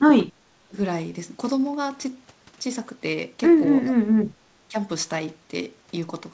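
The speech dips briefly at 0.30 to 0.34 s and again at 0.68 to 0.74 s. These early dips are shallow, around 10 to 15 dB. The big one comes at 3.84 to 4.31 s. There the level falls by roughly 30 dB for about half a second, nearly cutting out. A last short dip, about 10 dB, follows at 4.68 to 4.75 s. The likely cause is speech suppressed in double talk. The echo canceller mistook overlapping far-end talk for its own echo and pulled the near voice down. Throughout, nothing sounds above 8 kHz, which fits the G.722 call path.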